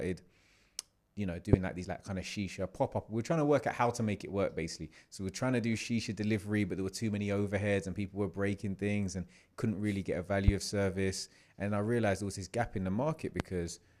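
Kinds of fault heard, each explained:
Loud pop: single sharp pops at 1.53, 10.48 and 13.40 s, each about 30 ms long and roughly 20 to 25 dB above the speech, which continues underneath. Unlike a dropout, nothing is lost. The likely cause is an electrical pulse from static or a switch.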